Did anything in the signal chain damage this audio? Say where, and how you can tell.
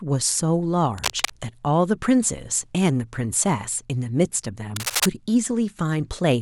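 Yes, in the analogue wiring. There's cable scratch noise from 0.98 to 1.33 s, an uneven rustle about 5 dB under the speech, and again from 4.76 to 5.06 s at roughly speech level. Likely a worn cable or connector shifting, its contact resistance jumping.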